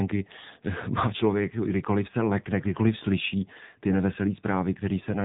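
Speech heard through the AMR narrowband mobile codec throughout. Nothing passes above 3.8 kHz. The voice sounds plainly buzzy and synthetic, which fits a low rate near 7.4 kbps.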